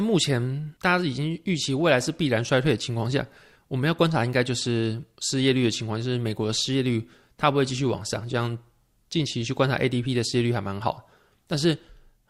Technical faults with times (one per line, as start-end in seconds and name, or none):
none